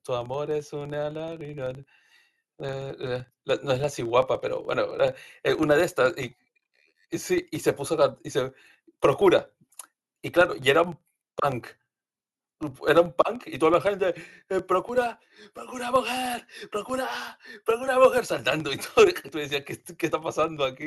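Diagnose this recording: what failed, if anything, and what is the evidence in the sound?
Filter restarted on every block, throughout the speech: a level-tracking 23.4 Hz buzz shows processing clearing filter state each block, consistent with 2048-sample blocks.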